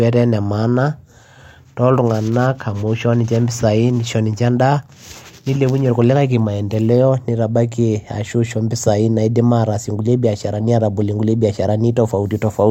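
Nothing in the recording stands out as a technical fault, so there's nothing here to point to or time-stamp.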